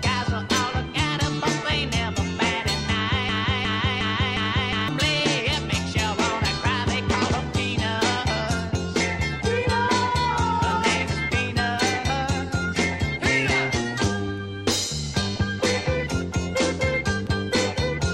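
Broken-record loop, 3.29 to 4.88 s: a 0.36 s fragment repeats four times back to back, likely a stalled stream resending its last chunk.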